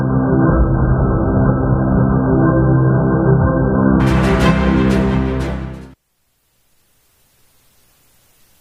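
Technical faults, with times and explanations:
0.00–4.00 s, adaptive stream starting at a low bitrate: the opening sounds dull and smeared, with nothing above 1.6 kHz and a watery, swirling coarseness. At 4.00 s the treble and detail return abruptly, with no gap. The player began on a very cheap version of the stream so playback could start quickly, which fits AAC at around 8 kbit/s. Once it had gauged the connection it switched to a far better rendition, consistent with about 96 kbit/s.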